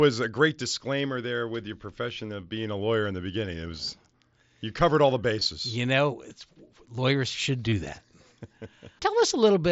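A brief buzzy hold with a slight warble appears from 5.40 to 5.46 s, where scattered gaps total about 37.5 ms. The longest stretch is 15 ms. An almost hidden blip follows at 6.42 s, and a firmer 30 ms buzz runs from 7.69 to 7.72 s. This is concealed Bluetooth headset packet loss: lost voice packets were patched by repeating recent waveform. The speech carries the wideband mSBC codec's light grain on loud sounds.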